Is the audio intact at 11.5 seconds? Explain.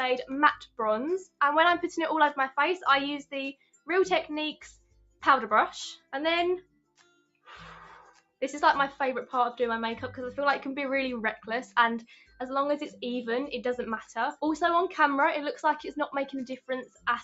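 No. A sound cut by the noise suppressor runs from 11.39 to 12.40 s. The suppressor mistook it for noise and pulled it down by up to about 11 dB, for around 0.4 s in total, so it sinks in level. Underneath, a noise suppressor applied to music or sounds keeps swinging the level by around 10 dB, so sustained parts fade while attacks get through.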